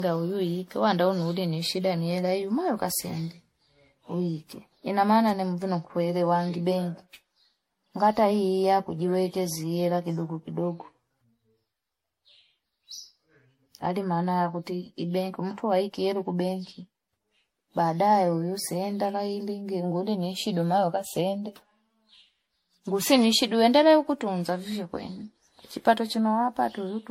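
Generation loss runs throughout, from 0 s to the end. The speech sounds swirly, smeared and hollow, and consonant attacks blur. The likely cause is about seven rounds of lossy re-encoding, consistent with MP3 near 61 kbit/s, each pass requantising on a shifted frame grid so noise and spectral holes accumulate.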